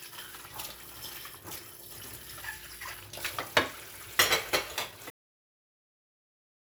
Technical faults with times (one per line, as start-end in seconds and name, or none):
5.10-6.75 cut-off end